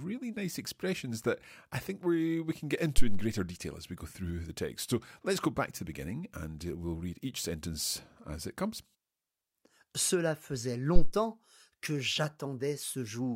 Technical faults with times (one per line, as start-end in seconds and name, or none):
2.98-3.31 phantom power thump
10.96-11.10 phantom power thump